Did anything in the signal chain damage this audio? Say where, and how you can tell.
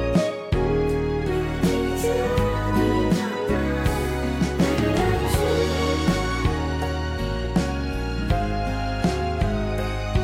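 No, nothing in the signal chain damaged this audio, and no stage left any audible trace.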